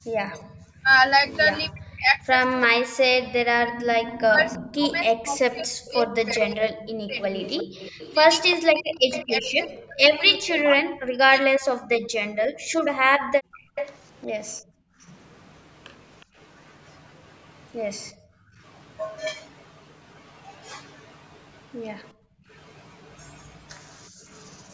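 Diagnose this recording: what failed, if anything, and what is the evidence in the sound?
Speech suppressed in double talk, at the call-processing stage. From 0.11 s to 11.8 s the speech dips and breaks up in pieces, around five seconds in total. The deepest drop is about 40 dB. The likely cause is the echo canceller meeting both sides talking at once. It could not tell the near talker from the loudspeaker return, so it attenuated everything.

Echo leak, also in call processing. A delayed copy of the speech trails the original. It appears from 0.32 to 1.22 s at about 25 dB down, and from 4.45 to 10.51 s at about 15 dB down. It returns from 13.52 to 16.24 s at about 10 dB down, and from 23.84 to 24.67 s at about 35 dB down. The delay is steady at 347 to 370 ms. This steady lag likely points to a loudspeaker on one side whose canceller left residual echo in its microphone path.

Background gated by the echo canceller. 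Between 11.99 s and 18.63 s the room sound drops away, roughly two seconds in total, by up to about 40 dB. Between 22.13 s and 24.26 s it drops again, for about half a second, by up to about 34 dB. The floor returns when the canceller releases. The suppressor is clamping the microphone while the loudspeaker plays, inside a band that stops at 8 kHz, as call processing does.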